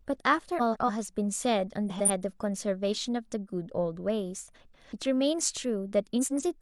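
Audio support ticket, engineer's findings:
Frames out of order, four spots: 0.59–0.90 s, 1.89–2.10 s, 4.54–4.93 s, 6.21–6.43 s. Garbled flutter in the speech. Adjacent runs of frames swapped before decode, halves of about 139, 93, 186 and 93 ms, which fits runs of two to four frames. Nothing dropped, just reordered. Probably the packet reassembly or jitter buffer.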